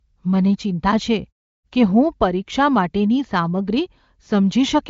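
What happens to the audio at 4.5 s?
Nothing goes wrong at 4.5 s: the audio is intact there, carried through the AMR wideband path at a rate high enough that its coding leaves at most faint traces, with no content above about 7.5 kHz.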